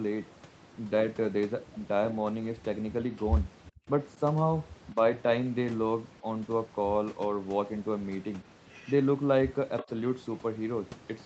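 Between 3.74 and 3.88 s the speech nearly vanishes, dropping by roughly 40 dB for about 150 ms. At 4.92 to 4.96 s a much smaller dip of around 5 dB follows. Both are speech suppressed in double talk, likely caused by the echo canceller mistaking near-end speech for loudspeaker echo while both sides talked and turning the signal down.

From 9.78 to 9.86 s a faint, delayed copy of the voice surfaces about 380 ms behind the original, sitting roughly 15 dB below it. This is an echo leak, likely from a speakerphone whose canceller let part of the returned audio through. Overlapping it, from 9.82 to 9.89 s, the live speech dips by around 15 dB, likely more double-talk suppression as the canceller reacted to that same overlap. Throughout, the audio stays within the 8 kHz bandwidth of the Opus call path.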